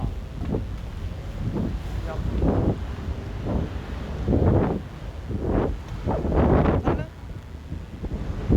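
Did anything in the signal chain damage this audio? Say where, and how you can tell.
Yes. A steady, raspy mains buzz sits under the sounds for the whole clip, well below them in level. It enters at the analogue wiring stage: sharp switching spikes from a dimmer, rectifier or unshielded cable, twice per 60 Hz cycle, spread harmonics into the kilohertz range.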